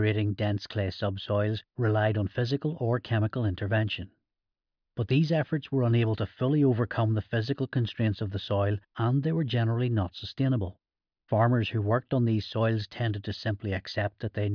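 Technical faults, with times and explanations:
No technical faults can be heard in the speech.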